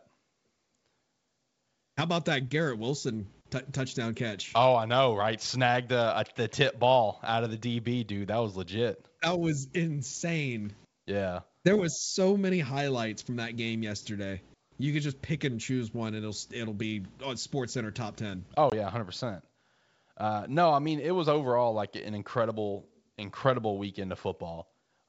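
A wideband telephone speech recording carried over G.722 at 64 kbit/s shows packet loss on an ADPCM call at 18.70 to 18.73 s, where about 20 ms of audio, roughly a couple of packets, drops out. On a waveform this is a flat, hard-edged gap. A spectrogram shows a thin vertical blank across the full band up to 7 kHz. The decoder's adaptive predictor and step size lose track of the sender's, so speech resumes slightly distorted before settling within some tens of milliseconds.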